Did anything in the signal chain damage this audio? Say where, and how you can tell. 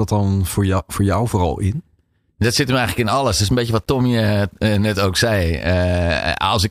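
Yes. From about 2.57 s through to the end, the speech picks up a grainy, gritty texture that tracks the voice itself, getting rougher as the level falls and leaving the quietest parts sputtering rather than fading smoothly. That points to low bit depth without dither, likely introduced at a sample-format conversion stage. The signal was rounded to very few steps, and the error sits only around 45 dB below the signal, which fits something like 9-bit resolution.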